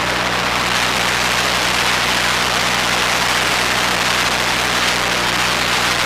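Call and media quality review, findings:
Periodic USB or driver dropouts, 0.11 to 6.01 s: regular ticks every 0.123 s, about fifty in all, audible only under signal. A bus or driver stall skips a couple of milliseconds each time. Spectrogram: evenly spaced thin vertical broadband lines. Waveform: abrupt splices, no silent gaps.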